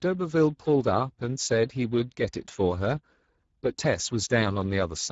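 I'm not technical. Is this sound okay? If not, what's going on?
No. Speex codec damage runs through the whole clip, start to finish. This older voice-chat compression squeezed the speech into too little data, so it sounds noisy and hoarse. The crisp top end is replaced by a hiss-like fill, and nothing survives above about 7.7 kHz.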